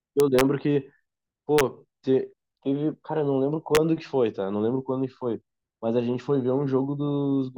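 Integer overflow cracks violently at 0.20 to 0.41 s, 1.59 to 1.61 s and 3.75 to 3.77 s. Speech peaks pushed only about 1 dB (the last about 0 dB) past the integer limit wrap to the opposite sign. The waveform shows sudden sign-flipping jumps, and the spectrogram shows broadband vertical streaks.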